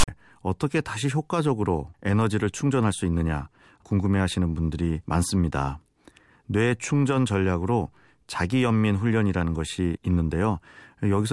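File tags played as audio open this speech clip from 0.00 to 0.08 s. A block of text tags is being read as samples, giving a loud, one-sided rasp with hard edges, followed by dead silence where the tag block's zero padding was decoded.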